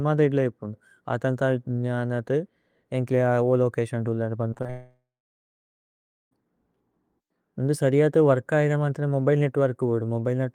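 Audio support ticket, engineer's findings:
Repeated packet loss, 4.49–4.70 s: five short gaps, longest 26 ms, each patched by extending the preceding audio. About 42% of the stretch is concealed. Result: choppy sound with pieces missing.

4.70–6.33 s: likely a long network dropout; receiver gets nothing for about 1.6 s. Last sound continues as a fading buzz or hiss, then about 1.3 s of silence. Audio resumes at 6.33 s with the gap lost.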